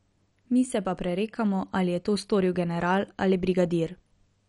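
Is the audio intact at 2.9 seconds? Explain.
No. At 2.9 seconds the speech carries the same damage heard throughout the clip, likely from MP2 compression. Nothing is present above 11.3 kHz, so the sound is dull, and a gurgling, granular distortion is plainly audible. Layer II divides the spectrum into 32 sub-bands and allocates bits among them. Starved of bits, it drops upper bands, lets others flicker in and out, and quantises the remainder coarsely, consistent with a low rate around 48 kbps.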